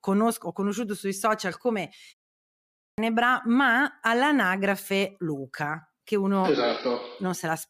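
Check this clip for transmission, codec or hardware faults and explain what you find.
One fault is present, a clipped start after a pause. It occurs at 2.44 s, after a silence of about 0.39 s. The sound resumes abruptly, and its opening is missing until 2.98 s, so about 0.54 s is lost. The output device powers down or loses lock during the silence. It needs time to wake before it can play again. Whatever arrives in that window is swallowed. The speech therefore jumps in mid-sound, without its first sounds.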